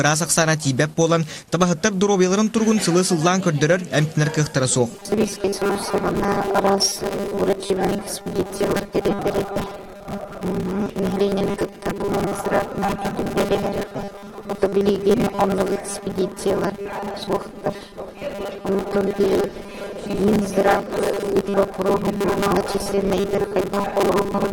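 From 4.91 s to the end at 24.53 s, the sound turns into a rigid, metallic buzz pitched at 200 Hz: robotic sound from repeated short buffers. The likely cause is audio arriving too seldom, so roughly half of the output is repeats of a 5 ms buffer.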